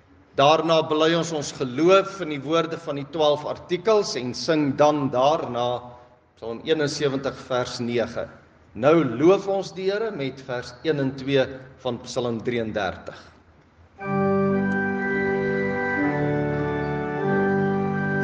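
No technical faults can be heard anywhere in the audio; the signal stays continuous and stable throughout.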